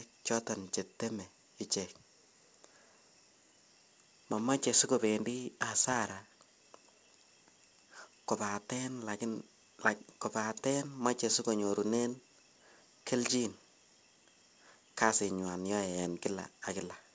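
There are no technical faults to describe in this speech recording.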